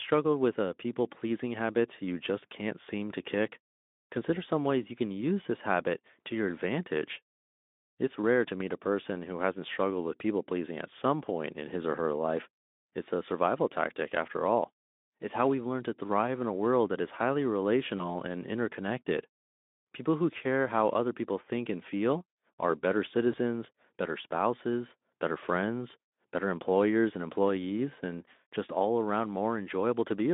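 At 17.98 s, after "world that is highly", VoIP packet loss concealed by the speech codec sets in. About 20 ms of audio went missing, which fits a single lost frame. The decoder filled the gap by extending its last pitch and filter while lowering the gain. The sound briefly turns into a buzzy tone or coloured noise that fades. It stays weak or distorted until 18.21 s, before "and interconnected". The same happens from 23.31 to 23.38 s, between "and feel are better" and "better spouses better friends", over the narrow, lightly coloured Speex line.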